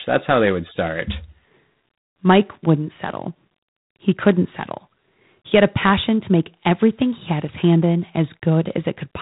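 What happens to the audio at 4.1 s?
At 4.1 s the speech is passing through G.726 ADPCM, as it does for the whole clip. With so few bits per sample coding the difference from a running prediction, it fits 24 kbit/s. The result is a harsh, rasping hiss that rises and falls with the speech, and nothing above 3.9 kHz.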